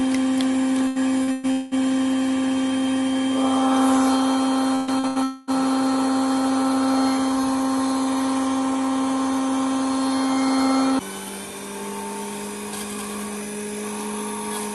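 From 0.87 to 1.74 s there is repeated packet loss, giving a robotic sound. Four gaps, the longest 200 ms, were each patched by continuing the preceding audio, so about half of this span is synthetic fill. The result is choppy, with pieces of the audio missing.

At 4.75 to 4.90 s a burst of packet loss removes 120 ms. The receiver extends the last sound and turns it down across the hole, so a held buzz or fading hiss is heard. A second burst at 5.07 to 5.18 s does the same over 80 ms.

Between these, at 4.99 to 5.06 s, a short concealed packet loss of 40 ms appears as a brief smear or wobble. The decoder bridges the hole from the preceding waveform and then blends back into the real signal.

From 5.23 to 5.50 s the audio stops arriving for 240 ms, most likely a long network dropout. The whole stretch is filled with decaying continuation, never reaching silence, before the real signal resumes past the lost section. 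All of this sits on an Opus call path whose high end stops near 12 kHz.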